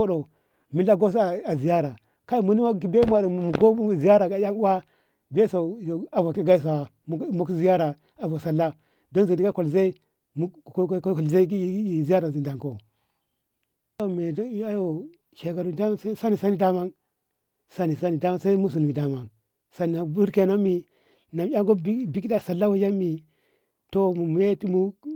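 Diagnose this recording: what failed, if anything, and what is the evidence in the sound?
Network stage, with the Opus decoder covering for it: this is lost packets rebuilt from error correction. There's no dropout anywhere, just brief rough, noisier patches at 6.47–6.53, 9.51–9.53, 15.47–15.49, 20.65–20.67 and 22.27–22.41 s. The last one holds about 80 ms of rebuilt audio, which fits four separate 20 ms frames going missing. In each case the next packet carried a low-bitrate copy of the lost one, and the decoder played that instead, hence the grit without any gap.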